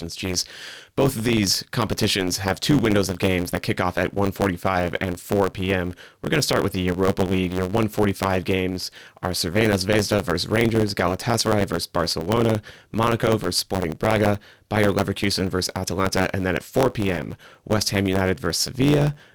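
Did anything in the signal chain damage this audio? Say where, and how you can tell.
Yes. A block size mismatch (truncated) at the buffer stage runs through the whole speech clip. A steady buzz near 92 Hz shows as evenly spaced vertical seams on a spectrogram and as small discontinuities in the waveform. Each written block, which fits 512 samples, loses its tail when the next stage reads it. That makes the speech about 1.07 times faster with its timbre kept.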